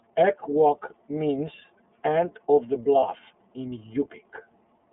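A thin, band-limited speech recording with a slightly rough, synthetic edge throughout, typical of the iLBC codec. Nothing passes below about 200 Hz or above 3.5 kHz, and the plainly audible grittiness fits iLBC's 30 ms mode at around 13.33 kbps, where each frame's excitation is coded on its own. From 3.0 to 3.04 s, right after "means end of the", there is a brief held, faintly buzzy vowel-like sound before the voice snaps straight back. This is lost iLBC frames, and it fits a single dropped 30 ms frame. The decoder filled the gap by repeating the last pitch cycle mixed with noise, and because iLBC frames stand alone, the voice came right again almost at once.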